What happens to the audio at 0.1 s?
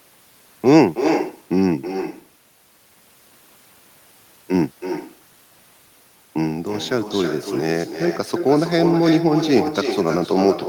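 With no echo canceller on the far end, its loudspeaker feeds back into its microphone throughout the clip, so this speech returns about 7 dB quieter roughly 300 ms later.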